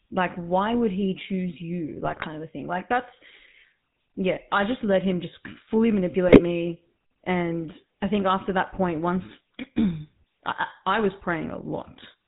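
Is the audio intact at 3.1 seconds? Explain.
No, at 3.1 seconds the speech carries GSM full-rate codec damage, as it does throughout. Pulse-driven vocal-tract coding at 13 kbps leaves a buzzy, gravelly roughness, with nothing above 4 kHz.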